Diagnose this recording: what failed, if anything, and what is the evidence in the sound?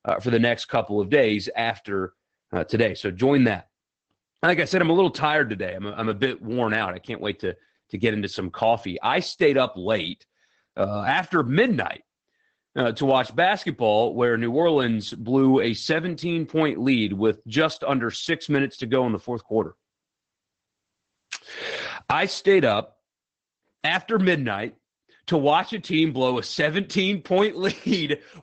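Codec stage: Opus voice compression, SILK mode, throughout; nothing above 8.4 kHz and coarse excitation, fitting about 12 kbps, leave speech muffled, hoarse, slightly robotic.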